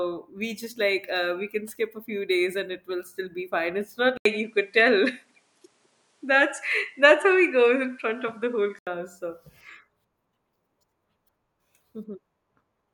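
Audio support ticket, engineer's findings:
4.17–8.87 s, after "be fine it's not": input switched to a poorer device, likely a second microphone. 80 ms dropout at switch, flat line on waveform. Spectrogram: band cut above 11.4 kHz, faint new noise floor, level steady. Full band returns 8.87 s.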